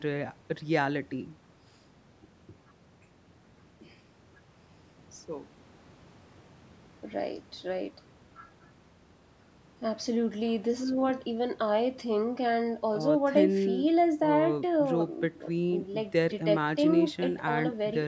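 No technical faults can be heard in the speech; the low-bass roll-off and the absence of anything above 8 kHz come from ordinary call microphone processing.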